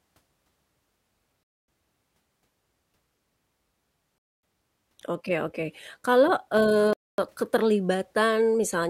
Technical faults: gap between chunks

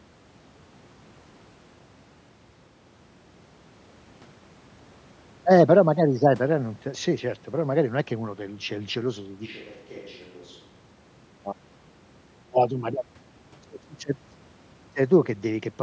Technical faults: switch to a distant microphone

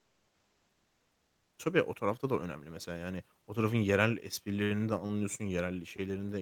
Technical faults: comfort noise in place of the background

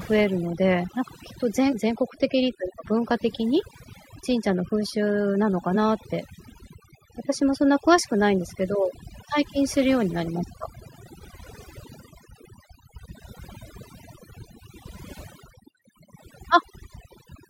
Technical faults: overdone noise removal; compressed frames skipped

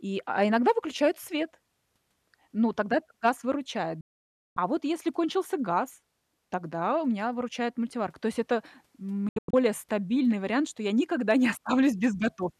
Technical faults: digital broadcast dropout

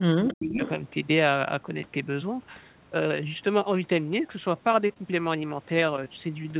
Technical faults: speech suppressed in double talk; echo leak; short concealed packet loss; short stall from a late packet

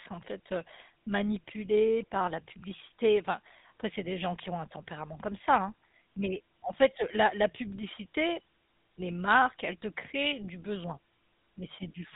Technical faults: GSM full-rate codec

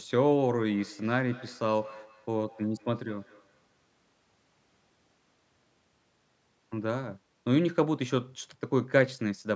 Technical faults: feedback echo between two devices

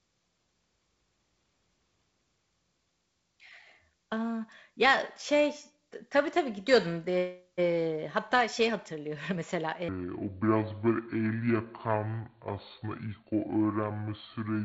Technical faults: section at the wrong speed

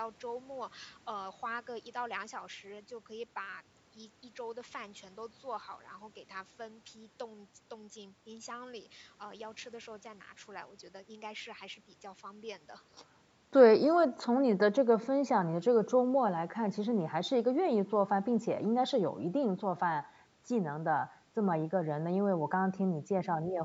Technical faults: none

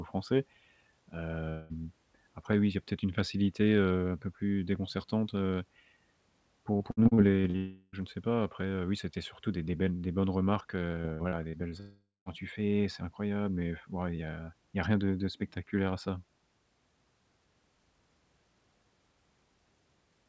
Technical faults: long network dropout; repeated packet loss (robotic sound)

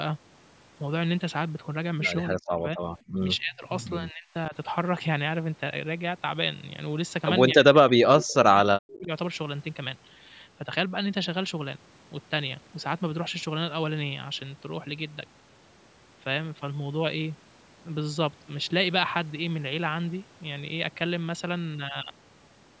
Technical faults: speech suppressed in double talk; echo leak

